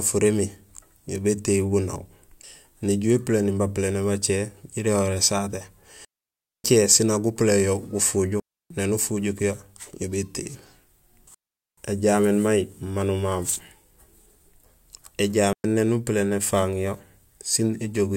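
Digital wireless dropouts cut into the speech at 6.05 s, 8.40 s, 11.34 s and 15.53 s, lasting about 0.59, 0.30, 0.43 and 0.11 s. Each time the radio link lost more data than the receiver could cover, so it muted with a very quick fade. The result is a clean hole of near silence, with no burst of noise or hiss before or after, and the speech resumes abruptly once the link recovers.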